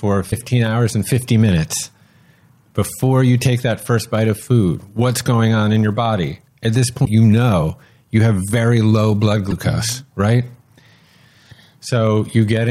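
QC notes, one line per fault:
0.30–0.33 s, 7.04–7.07 s and 9.50–9.53 s: broken MP3 bit reservoir. Each is a brief glitch of about 25 to 30 ms. The sound skips ahead. The first two fall just before "hours and" and "you know you have". The third comes just after "have very low blood". Each lasts about one 26.1 ms MP3 frame. Frames were likely cut out, so the next frame read borrowed reservoir bytes belonging to another frame and decoded garbage.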